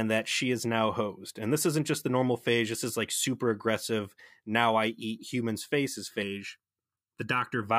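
From 6.23 to 7.63 s, right after "I eat humans' faces", channel delay causes comb filtering. One channel lags by under a millisecond, and summing to mono cuts evenly spaced notches from around 700 Hz up, making the speech hollow and phasey. Unlike flanging, the notches stay fixed rather than sweeping.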